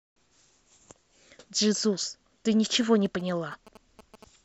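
A galloping dit-dit-dit of short buzzes cuts into this speech recording from 2.73 s to 4.24 s, sitting roughly 20 dB below the speech. The buzz repeats at about 217 Hz, the signature of GSM signalling bursts: a nearby 2G phone is sending brief groups of radio pulses while it negotiates with the network, and the audio circuitry rectifies that RF energy into audible clicks and buzz.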